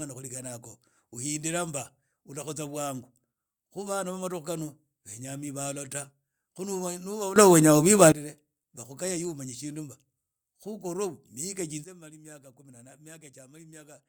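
Speech with two sudden gain jumps: at 7.36 s the level steps up about 16 dB until 8.12 s, and from 11.84 s to the end it drops about 13 dB, background noise shifting with it, likely from gain applied without a ramp. The waveform shows abrupt envelope steps and the spectrogram vertical brightness edges.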